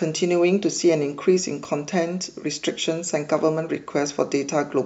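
At 1.65 s the speech jumps forward. There is no gap of silence. The likely cause is a dropped buffer (overrun): the audio was not read before the hardware overwrote it. A few milliseconds vanish, and the edges are spliced together.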